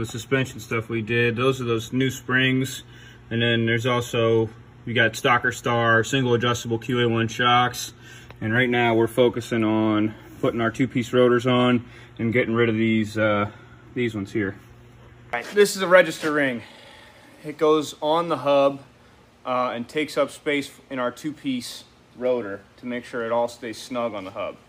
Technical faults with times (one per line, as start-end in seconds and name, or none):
none